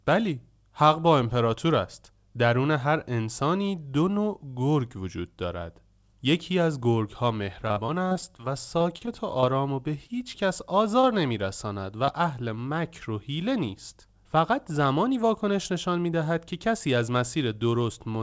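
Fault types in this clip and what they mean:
Repeated packet loss (robotic sound): Choppy, robotic stretches from 7.6 to 8.41 s and 8.79 to 9.45 s, with pieces missing. Packets kept arriving lost or late, eight gaps then five, the longest 46 ms, each patched by stretching the previous sound, covering about a fifth of the first stretch.
Short concealed packet loss: Brief smears or wobbles near 10.07, 11.01 and 12.05 s, each lasting a couple of hundredths of a second. About 20 ms of audio failed to reach the decoder each time, and the receiver bridged the hole by extending the last sound before blending back.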